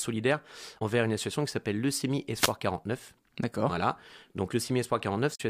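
Damaged data in a compressed stream, 0.76 to 0.82 s and again 5.34 to 5.41 s: in each spot part of the coded stream is wrong, so the decoder misreads or drops the affected frames, loses sync and hunts for the next valid frame header. Both are heard as a brief blip of about 60 ms. The first comes just before "une association qui s'appelle", and the second lands near the end of the clip.

Wireless microphone noise hit, 2.35 to 2.53 s: the radio link of an analogue FM microphone fades as reflected signals cancel each other, so receiver noise rises over the speech. Here it is a short swish of static lasting about 0.19 s before the signal recovers.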